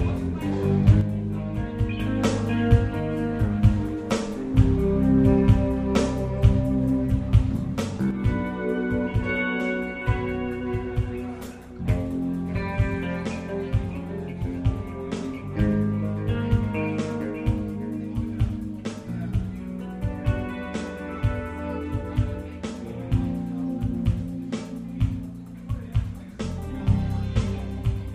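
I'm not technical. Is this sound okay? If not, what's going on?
No. One channel drops out, from 1.01 s to 1.99 s and again from 8.1 s until the end. In both stretches the sound suddenly becomes noticeably quieter, as if someone turned it down, and then stays that way. The likely cause is that one side of the stereo signal went silent. Whatever both sides shared plays at reduced strength, and anything carried only on the missing side disappears completely.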